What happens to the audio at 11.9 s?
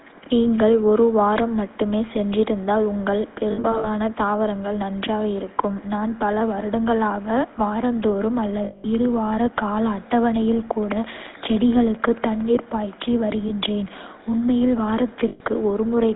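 A steady ticking, about 4.4 clicks per second and roughly as loud as the speech, runs from 10.83 to 12.42 s, starting just after "இரு வார கால அட்டவணையில்". It is a train of clicks, likely from electrical interference or a struggling interface. Throughout, the speech is buzzy and gravelly and confined to about 250 Hz to 3.7 kHz, which fits the GSM full-rate codec at 13 kbps. That codec rebuilds the voice from a coarse, pulse-driven excitation.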